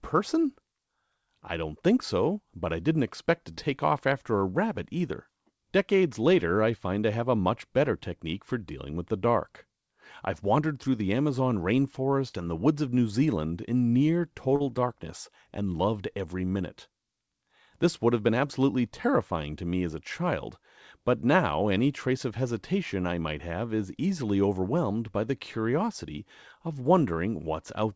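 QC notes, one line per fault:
3.52–3.60 s, burst of packet loss: between "I didn't expect to" and "off after a rabbit" the last sound is stretched for about 46 ms and fades before the audio jumps ahead. About 40 ms of speech never arrived in time, so the receiver extended and faded the last sound, then resumed past the gap.
12.29–12.35 s and 14.56–14.63 s, short concealed packet loss: there are brief smears just before "and the woods of" and between "in near" and "darkness and loved every". Each time about 40 ms of audio was lost. The receiver filled roughly 35 to 38 ms by continuing the preceding sound and blending it back into the real signal.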